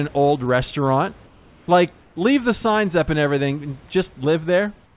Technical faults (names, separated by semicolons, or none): comfort noise in place of the background